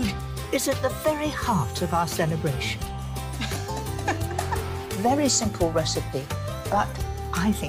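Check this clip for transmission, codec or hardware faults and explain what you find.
One fault stands out: a single sharp click at 7.18 s, most likely from dropped samples. A handful of samples, a fraction of a millisecond, went missing, so the waveform leaps straight to a later value. Unlike a dropout, no sound is lost. There is just a thin vertical line in the spectrum.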